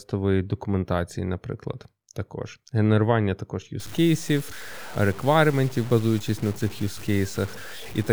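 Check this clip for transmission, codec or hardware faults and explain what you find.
One fault, from 3.80 s to the end of the clip: low bit depth without dither. The likely cause is the speech being requantised to about 6 bits by simple truncation, with no dither to break up the rounding error. That error tracks the waveform instead of forming a steady hiss, sitting roughly 20 dB below the signal. The result is a grainy, buzzing distortion that shifts with the speech, rougher on quiet passages and sputtering as levels fade.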